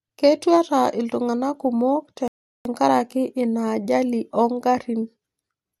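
At 2.28 s the speech just drops into silence and sits there until 2.65 s, then picks right back up from exactly where it left off. That's a rebuffering stall: the player burned through the audio it had downloaded and had to wait for more to arrive. Nothing goes missing, so there's no skipped chunk, but about 375 ms of dead air gets inserted, which reads as an awkward hitch in the flow.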